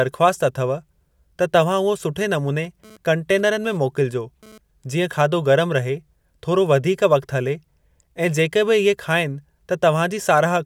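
From 2.64 to 4.58 s, GSM phone buzz intrudes. A nearby 2G phone's 217 Hz bursts get rectified into a raspy buzz, about 26 dB down.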